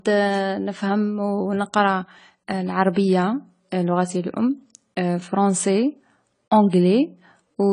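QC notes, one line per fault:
Throughout: AAC compression. Nothing is heard above 10 kHz, so the speech sounds dull and closed in. The damage is plainly audible. Sibilants come out fizzy and smeared, and held sounds warble. The likely cause is AAC-LC coding at a low bitrate. The encoder quantises each frame against a hearing model and throws away detail it judges masked. At this rate it also drops the top band. The degree of damage fits about 24 kbps.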